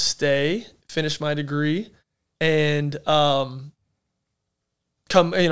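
Nothing in the recording stands out as a technical fault, so there's nothing here to flag.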